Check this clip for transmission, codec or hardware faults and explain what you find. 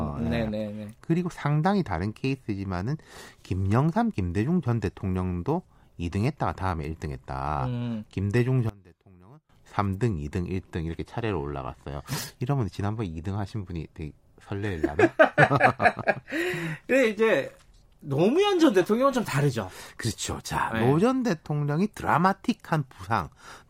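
One fault is present, lasting 0.8 s from 8.69 s to 9.49 s. Over that stretch the speech drops by about 24 dB, leaving a faint residue before the level returns. The likely cause is one channel inverted: with one stereo channel in reversed polarity, the centred content common to both channels cancels when the signal is summed to mono, and only the small left-right difference survives.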